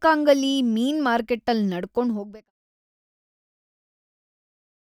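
There are no technical faults in this speech clip; the smooth fade-out from about 2 s to 2.52 s is a deliberate edit.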